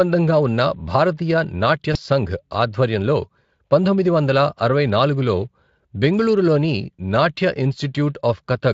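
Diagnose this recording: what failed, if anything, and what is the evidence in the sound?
The network stage dropped a packet: VoIP packet loss concealed by the speech codec. At 1.93 to 1.97 s, just before "సంఘ్ ఆధ్వర్యంలో పంతొమ్మిది వందల", the speech smears into a brief, fading stretch of buzz or coloured noise. The Speex decoder repeated its last pitch and filter, which fits one lost 20 ms frame.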